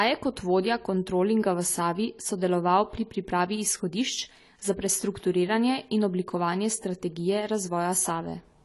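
Throughout the speech, nothing sounds above about 11.5 kHz. The top end is dull and smeared, with a fizzy, warbling edge on sibilants. This is likely AAC compression. The encoder dropped high bands and coarsely quantised the rest, which fits a low bitrate near 32 kbps.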